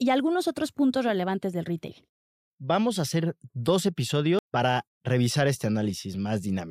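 At 4.39 s, right after "a hacer dos", the speech has a CD skip. A knock or surface flaw threw the laser onto a different turn of the disc's spiral, so the player muted for only a few milliseconds and resumed elsewhere, jumping by a whole number of disc revolutions. It sounds like a small tick with the speech abruptly displaced. On the waveform there is a tiny flat gap with mismatched edges. A spectrogram shows a thin broadband vertical line where the speech harmonics break off and restart out of step.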